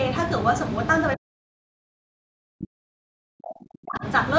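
Speech suppressed in double talk runs from 1.15 to 4.05 s. For nearly three seconds the speech sinks, at its deepest by roughly 40 dB, likely because an echo canceller mistook it for loudspeaker echo while the far side spoke.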